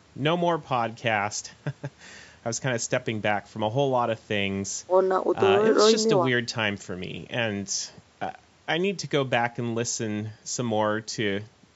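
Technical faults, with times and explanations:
Nothing stood out as a technical fault on listening to this speech recording.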